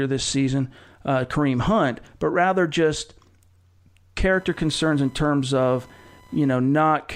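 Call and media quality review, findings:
Computer activity noise, 4.33 to 6.68 s. Chirping buzz with a pulse rate around 1 kHz, sitting roughly 30 dB below the speech. Probable component: analogue input stage sharing ground with the host PC. Mechanism: CPU, GPU or mouse load shifts ground current, injecting interference that follows machine activity rather than the speech. Starts and stops independently of the talker.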